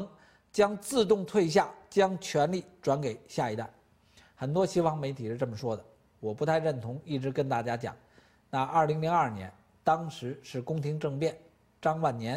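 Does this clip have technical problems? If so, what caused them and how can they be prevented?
No, there's nothing technically wrong to hear in this clip, so there's nothing here that needs preventing.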